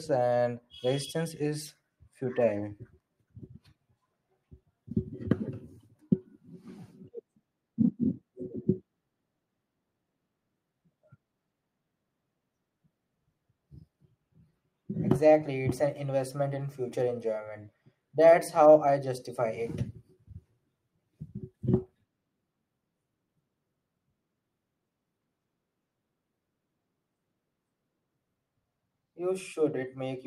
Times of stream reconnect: none

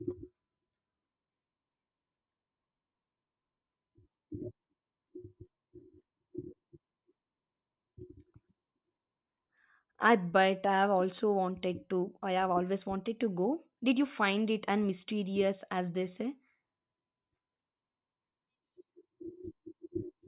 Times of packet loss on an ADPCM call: none

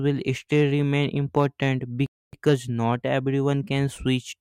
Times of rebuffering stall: 2.06-2.33

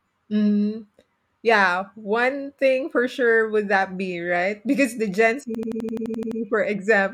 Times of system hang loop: 5.55-6.40

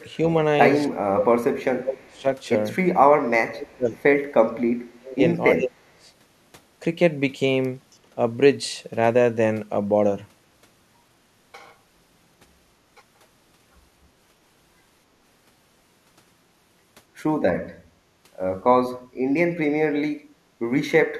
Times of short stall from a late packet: none

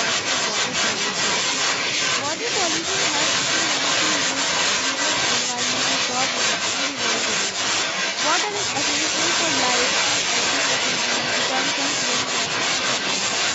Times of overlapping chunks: 4.06-4.11, 10.11-10.16

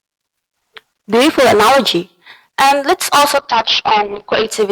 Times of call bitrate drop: 3.38-4.53

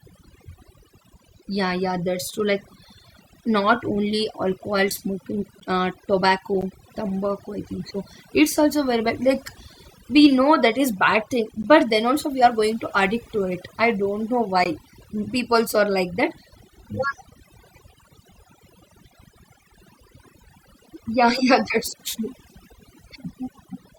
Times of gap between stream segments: 4.59, 5.60, 6.61, 11.63, 14.64

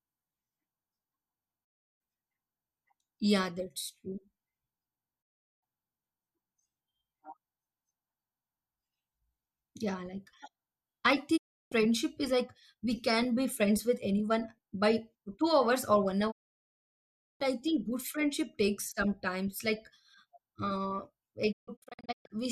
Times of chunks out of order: none

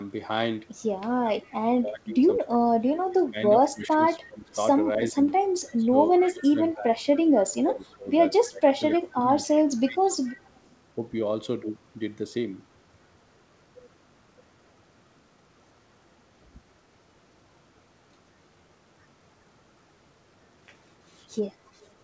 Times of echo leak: 1.45-1.53, 4.21-4.55, 5.69-6.31, 9.47-10.60, 21.82-21.87

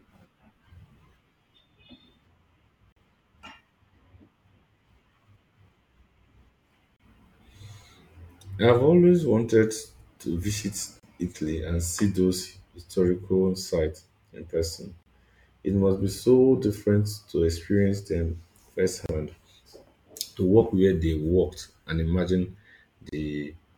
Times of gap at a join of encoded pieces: 2.92-2.96, 6.96-7.00, 11.00-11.03, 15.03-15.06, 19.06-19.09, 23.09-23.12

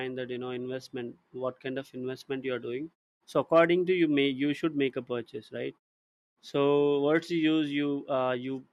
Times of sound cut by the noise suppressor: none

